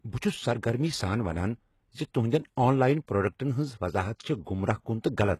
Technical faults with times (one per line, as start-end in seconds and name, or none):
0.00-5.40 HE-AAC compression